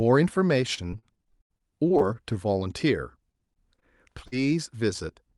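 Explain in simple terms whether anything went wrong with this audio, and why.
Something did go wrong, in two different ways, both caused by pieces of the call failing to arrive in time.

From 0.61 to 2.02 s there is repeated packet loss, which gives a robotic sound. Thirteen separate holes appear in quick succession, the longest about 80 ms. Each one is patched by stretching out the sound just before it, and roughly a quarter of that stretch is patched rather than real, so the sound turns choppy. A milder burst of the same fault runs from 3.32 to 3.84 s, with four holes of about 20 ms each.

From 4.28 to 4.34 s there is a single short concealed packet loss. About 40 ms went missing and was filled by continuing the preceding sound, then blended back in. It is heard as one brief smear or wobble. The robotic stretches differ because their holes come one after another and keep breaking the sound up over a longer span. 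Here there is one isolated gap that passes almost at once.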